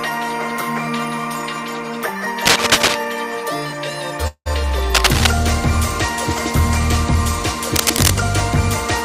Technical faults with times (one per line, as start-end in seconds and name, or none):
2.46-2.95 cable scratch noise
4.27-4.48 call audio freeze
4.94-5.27 cable scratch noise
7.76-8.13 cable scratch noise